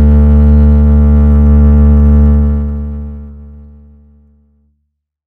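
No faults in the music; the smooth fade-out from roughly 2 s to the end tapers evenly, with no click or hard edge.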